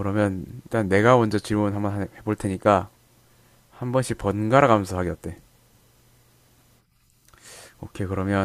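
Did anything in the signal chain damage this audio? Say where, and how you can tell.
No, I can't hear anything in this speech recording that points to damage from the signal chain. Listening through it, nothing in the sound ties back to a problem at any stage between capture and playback.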